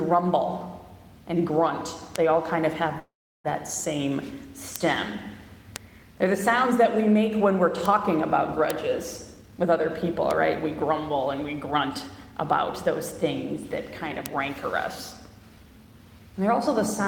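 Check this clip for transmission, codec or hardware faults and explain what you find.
Three kinds of fault are present: isolated digital spikes, one call audio freeze, and three stretches of jitter buffer speed-up.

Bit error spikes occur at 2.16, 4.76, 5.76, 7.86, 8.70, 10.31 and 14.26 s. A flipped bit in one to three samples makes a sharp tick. The waveform shows a lone needle, and the spectrogram a thin full-band vertical line.

A call audio freeze runs from 2.99 to 3.47 s, likely from delayed packets emptying the jitter buffer. The last sound buzzes briefly, then about 360 ms is silent, a blank gap in both views.

Jitter buffer speed-up runs at 9.34 to 10.04 s (121%), 10.65 to 12.33 s (109%) and 15.17 to 16.06 s (113%). In each stretch, around 150 ms of pitch-period slices is cut, so the sound is hurried at unchanged pitch. The spectrogram shows compressed timing with no pitch shift.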